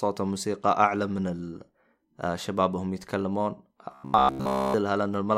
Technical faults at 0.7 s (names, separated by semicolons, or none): none